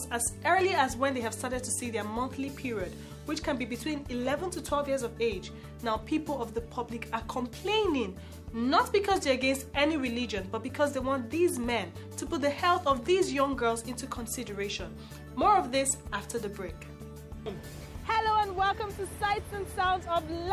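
No technical faults can be heard anywhere in the audio, and the signal holds steady without interruption throughout.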